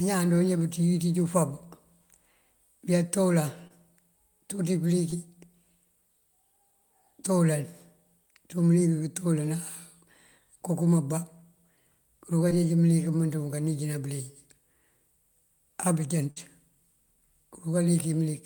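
At 3.67–3.72 s, 5.10–5.16 s and 12.49–12.52 s there are brief smears or wobbles. Each is short concealed packet loss: about 20 ms of audio arrived too late, and the receiver extended the preceding sound to cover it before blending back. At 5.10 s about 12 ms of audio is lost outright.

At 16.30–16.38 s the sound stretches into a held, fading tail, then resumes slightly further on. This is a burst of packet loss: about 60 ms went missing, and the receiver continued and turned down the last sound across the gap.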